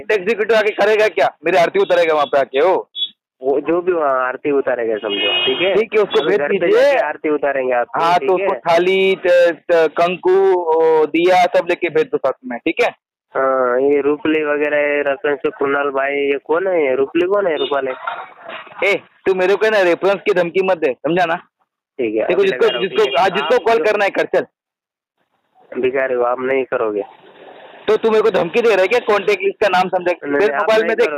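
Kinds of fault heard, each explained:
Gain pumping: The level breathes in and out across the whole clip. Each loud sound is pulled down hard. The swing is roughly 15 dB. Loud and soft parts sit close together and the sound feels squashed. The likely cause is input gain set far too high, with a fast limiter or compressor clamping every peak.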